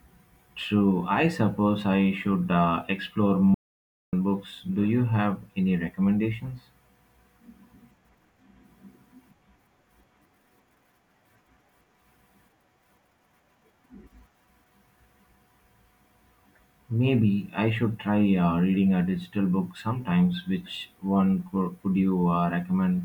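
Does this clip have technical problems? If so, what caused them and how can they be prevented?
Yes. There is an audio dropout to silence from 3.54 to 4.13 s. The speech stops abruptly and returns just as suddenly about 0.59 s later. The gap is silent, with no room tone underneath. Whatever was said in that span is lost. The likely cause is a brief loss of the input signal while the recorder kept writing silence. To prevent it, secure cables and wireless links, and monitor the input live during recording.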